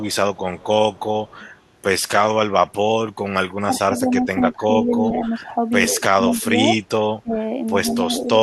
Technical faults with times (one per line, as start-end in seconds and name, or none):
0.11-1.54 echo leak
3.49-5.31 speech suppressed in double talk
4.86-5.29 echo leak
5.87-6.44 echo leak
5.99-7.35 speech suppressed in double talk
7.84-8.28 speech suppressed in double talk
7.86-8.27 echo leak